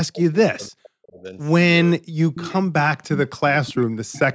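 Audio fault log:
0.13–0.35 s, 2.34–2.57 s and 3.8–4.35 s: echo leak. A faint delayed copy of the speech comes back about half a second (0.52 s) later, sitting about 20 dB under the main voice, closer to about 15 dB in the middle one. That's likely a loudspeaker on the far end whose echo canceller let some of its own pickup slip through.
0.52–1.35 s, 1.99–2.27 s and 2.93–3.78 s: speech suppressed in double talk. The voice keeps dipping and cutting out in pieces, bottoming out around 40 dB down, with well over a second affected in total. This is likely the echo canceller failing to separate the talker from the loudspeaker echo while both sides spoke at once, so it turned both down.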